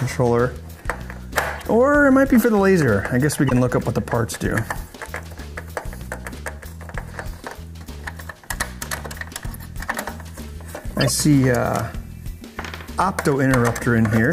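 The audio has four short bursts where corrupt frames were decoded. They fall at 1.59–1.62 s, 3.48–3.52 s, 4.85–4.89 s and 10.97–11.09 s. Each is a brief chirp or blip of misplaced energy, spanning a few codec frames. The last is the longest, at about 0.13 s. The loudest reaches about −5 dBFS at 3.5 s. The quietest sits near −35 dBFS at 4.9 s. Flipped bits made the decoder misread gains and spectral codes.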